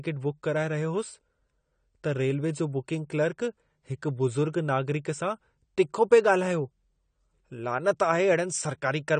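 AAC compression damage runs through the whole of this speech recording and is plainly audible. Nothing survives above 9 kHz, so the sound is dull and smeared, with a warbling texture on sustained sounds and sibilants. The likely cause is AAC-LC coding at a bitrate that fits about 32 kbps. There the encoder lowers its cut-off and quantises the remaining frequency lines coarsely, so fine detail is lost and smears across each frame.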